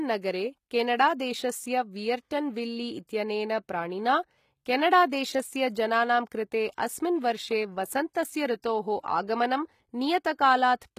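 Throughout the speech, the treble sounds rebuilt rather than captured. This is likely HE-AAC compression, at a rate that fits about 20 kbps. Upper bands are copied from lower ones, so harmonics misalign. Nothing remains above 14.9 kHz. The damage is plainly audible.

At 8.62 s there is pre-echo. A short hiss leads into an attack, spread over about 16 ms. The codec spread its noise across a whole block. The quiet moment before the onset was filled, smearing the attack.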